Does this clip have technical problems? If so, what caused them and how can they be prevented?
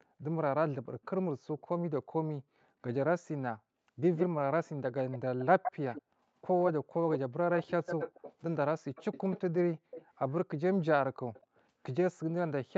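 Yes. Between 0.86 and 0.95 s the echo canceller clamped down on the microphone while the loudspeaker was active, producing background gated by the echo canceller. Its suppression cut the room sound by about 40 dB at its deepest, so the ambience briefly vanishes for around 70 ms and then returns once the canceller releases. To prevent it, use gentler residual-echo suppression or comfort-noise filling so the background isn't switched off during playback.

Echo leak is heard at 1.03–1.61, 4.16–4.26, 5.11–6.02, 6.6–8.33, 8.95–10.32 and 11.34–11.61 s. It likely comes from a far end playing the call on a loudspeaker while its echo canceller failed to remove what its microphone picked up, so that remnant was sent back. A delayed copy of the speech trails the original by 200 ms in the first stretch, 151 ms from 4.16 to 8.33 s, and 237 ms after that. It is barely audible at first, nearly as loud as the speech itself through the 151 ms stretches, then fades to a faint trace by the last one. 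The Opus path at 64 kbps, limited to 8 kHz, carries it along with the speech. Prevent it with headphones at the far end, or a better-converged echo canceller with accurate delay estimation.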